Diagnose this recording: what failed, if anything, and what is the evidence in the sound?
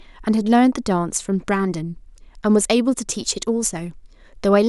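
Nothing failed; no faults audible.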